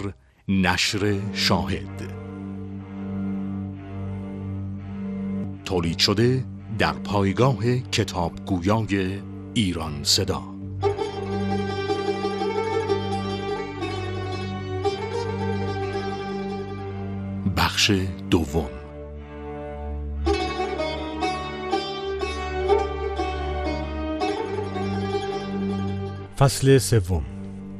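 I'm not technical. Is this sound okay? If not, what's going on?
No. All the way through, the sound is dull and muffled, with a gurgling, grainy roughness. That points to likely MP2 compression squeezed too hard. To save space, it switches off the highest sounds and stores the rest roughly.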